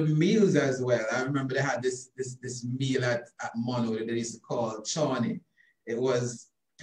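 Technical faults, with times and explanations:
No technical faults detected.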